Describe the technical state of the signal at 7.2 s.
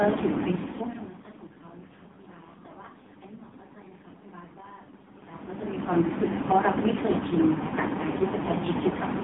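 At 7.2 s the speech carries AMR narrowband mobile codec damage throughout: nothing above 3.8 kHz, with heavy buzzy, synthetic coding that fits the lowest bitrate mode, near 4.75 kbps.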